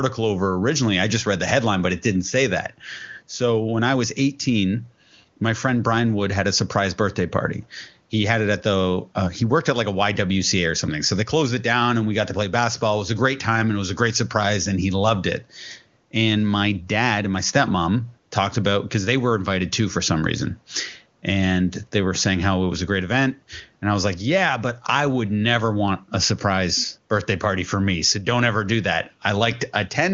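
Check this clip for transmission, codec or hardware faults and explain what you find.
I find no transmission, codec or hardware faults to explain in this clip.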